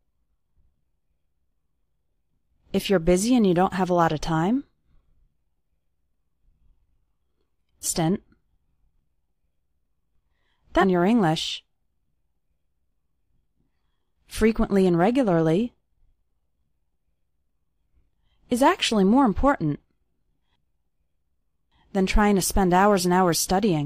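Three short glitches come from damaged data in a compressed stream: one from 7.81 to 7.86 s, another from 10.78 to 10.83 s, and a very brief one at 20.39 s. At each point part of the encoded stream is corrupt, so the decoder can't make sense of those frames, loses its place and has to hunt for the next valid frame header. You hear that as a quick chirp or blip breaking into the sound. The first two last about 50 ms, and the last is just a tick.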